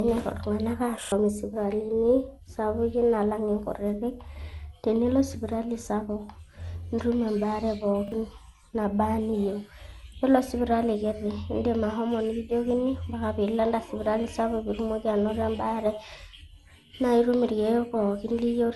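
Speech runs through a swirly, hollow smear with blurred attacks, and its spectrogram shows nothing above 11.8 kHz. This is likely generation loss from several rounds of re-encoding with an MP2-type codec at around 96 kbit/s. A repeated buffer stutter at 1.04 s plays a 40 ms slice two extra times, and another at 8.08 s, just after "nitum embaare", repeats it once. In the waveform each shows identical blocks with hard joins.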